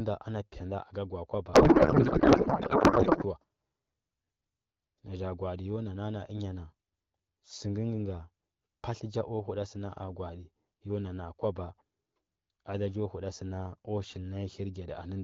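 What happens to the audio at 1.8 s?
At 1.8 s the speech falls inside a codec payload misread running from about 1.53 to 3.24 s. The AMR-WB frames, packed octet-aligned, are being unpacked as bandwidth-efficient, so every field lands in the wrong place. The speech gives way to garbled noise and warble that barely tracks it. Unlike dropouts or packet loss, the sound never goes silent. Frames keep arriving and decoding, but into nonsense, until the framing agrees again.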